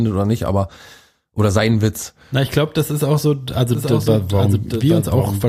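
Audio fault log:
3.75 s to end: doubled audio track. A second full-band copy of the speech enters abruptly, trailing by roughly 0.7 s and about 5 dB quieter, likely from an out-of-step second capture or edit. Unlike echo or reverb, it has no decay, no room colour and no repeats.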